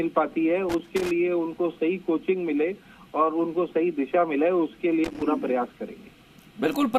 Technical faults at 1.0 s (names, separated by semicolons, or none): loose connector crackle